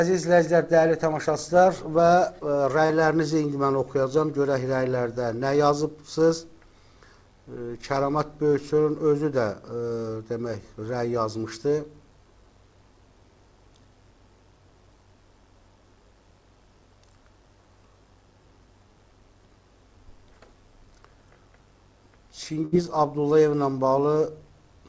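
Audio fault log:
2.86 to 2.91 s, short concealed packet loss: about 40 ms of audio did not arrive in time, and the receiver covered the hole with roughly 35 ms of synthesised continuation built from the sound just before it, then crossfaded back into the real signal. The result is a brief smear or wobble rather than silence. The surrounding band-limited character, with nothing above 8 kHz, fits a G.722 call path.
22.65 to 22.74 s, burst of packet loss: a longer run of about 60 ms was lost, and the concealment stretched to around 66 ms. The receiver kept extending the last sound while turning it down as the gap went on, so the preceding sound drags into a held, fading buzz or hiss. Playback then picks up further along, with the lost stretch simply absent.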